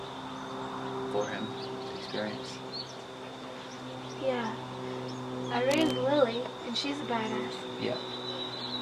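At 5.71 s a burst of cable scratch noise appears and lasts until 5.91 s, about a fifth of a second. It sounds like scratching or rustling laid over the audio, only a little quieter than the sound itself. The noise is dense and uneven, with no steady tone. The likely cause is a worn cable, connector or control carrying a DC voltage being moved. Its contact resistance shifts rapidly and injects these bursts.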